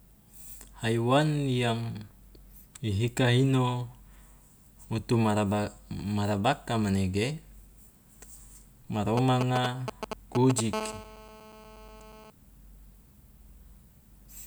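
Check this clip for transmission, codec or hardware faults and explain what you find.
Two related hardware faults from a nearby 2G handset appear in the second half of the speech.

From 9.17 to 10.60 s there are GSM signalling bursts: the phone sends short groups of radio pulses at 217 Hz while it negotiates with the network, and the audio circuit rectifies them. The result is a galloping dit-dit-dit of short 217 Hz buzzes, only a few dB below the speech. The broken rhythm separates it from the steady call buzz.

From 10.73 to 12.30 s comes GSM phone buzz, as the handset is now in a call and transmitting in bursts 217 times a second. The rectified pulses form an unbroken, raspy 217 Hz tone rich in harmonics, about 14 dB below the speech and unrelated to it. It is continuous rather than galloping.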